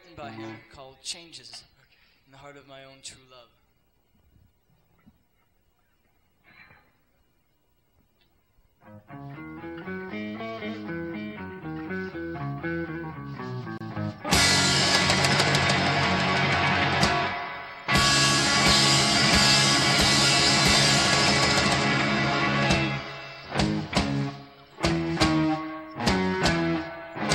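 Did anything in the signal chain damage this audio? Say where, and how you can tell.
Yes. At the codec stage, there is a gap at a join of encoded pieces from 13.78 to 13.81 s, a break of about 30 ms in otherwise continuous sound. The audio was encoded in separate pieces and joined untrimmed, so one piece's padded final frame and the next piece's start-up delay both remain as silence. Unlike a network dropout, nothing is lost: the sound resumes exactly where it stopped, and the gap's edges are softened by the codec.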